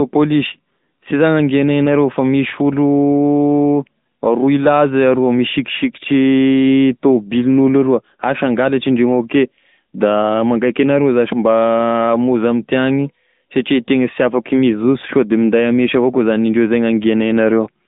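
The speech has been squeezed through the AMR narrowband mobile codec for its whole length. The coder rebuilds each 20 ms frame from a vocal-tract model excited by a handful of pulses, and the bit budget of AMR-NB's 10.2 kbps mode leaves plainly audible buzzy, synthetic damage. The band is confined to roughly 150 Hz to 3.7 kHz, with nothing above 3.8 kHz, so the speech sounds thin, muffled and telephone-like.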